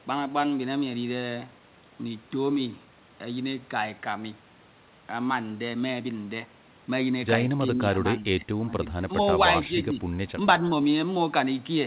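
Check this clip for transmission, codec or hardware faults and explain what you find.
There's one fault here, a cluster of speech dips just past the middle, all riding on a narrowband call path with nothing above 4 kHz, which fits a G.711 mu-law link at 64 kbps.

Speech suppressed in double talk shows up three times: 7.72 to 7.82 s, 8.21 to 8.47 s, and 8.66 to 8.74 s. The talker's level sags by about 5 dB in the first and last, and about 10 dB in the middle one. The likely cause is the echo canceller mistaking this side's talk, over simultaneous far-end playback, for its own loudspeaker echo and pulling the gain down on everything. It sounds like brief, choppy ducking of the voice.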